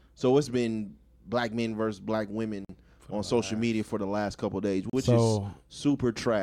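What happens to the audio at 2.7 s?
The speech drops out completely from 2.65 to 2.69 s, a gap of about 46 ms. This is a Bluetooth stall. The sound stops dead, then resumes. That pattern is likely caused by radio interference delaying packets on the wireless link. The headphones' buffer empties, so playback halts briefly. Once the retransmitted packets arrive, audio continues.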